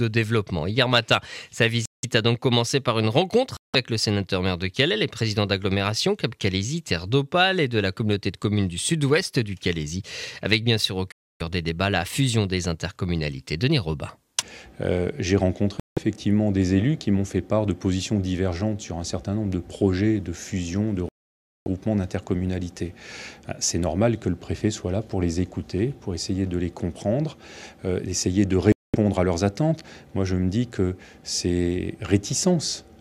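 Six dropouts cut the sound to silence at 1.86, 3.57, 11.12, 15.80, 21.09 and 28.72 s, mostly 170 to 280 ms, the one at 21.09 s about 570 ms. They are likely Bluetooth stalls, with the headphone buffer running dry. Each shows as a flat waveform and a blank vertical band on a spectrogram.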